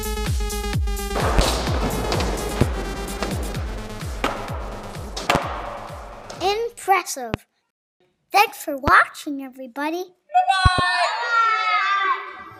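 Loud pops land at 1.39–1.41, 2.61–2.64, 5.35–5.38, 7.34–7.37 and 8.88–8.90 s, then a quick double pop at 10.66–10.81 s. Each one jumps roughly 20 dB above the sound, which carries on underneath. It's likely a voltage spike from a switch, plug or static.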